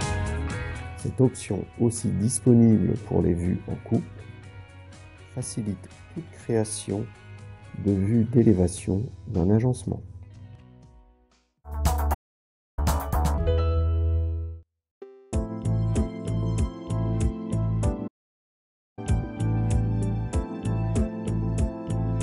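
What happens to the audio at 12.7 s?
At 12.7 s the audio is near the end of a playback stall that runs from 12.14 s to 12.79 s, a gap of about 0.63 s. The sound stops abruptly and the output goes silent, most likely because the player ran short of data or its thread was held up, until it recovers at 12.79 s. On a waveform this is a flat line between two hard edges; a spectrogram shows a blank vertical band across all frequencies.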